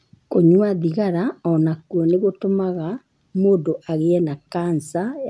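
No technical faults are audible.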